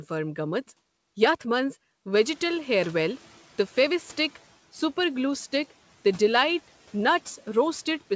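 At about 2.13 s the background noise jumps, and a noise suppressor catching up lets it through with less reduction at first before it sinks by about 7 dB over 2.24 s, settling at 4.37 s. Unlike pumping, it declines once and smoothly, not in step with the speech.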